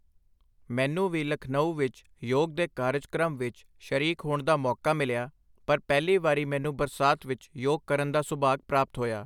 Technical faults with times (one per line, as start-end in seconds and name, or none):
none